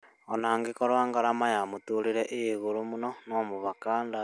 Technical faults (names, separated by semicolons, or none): none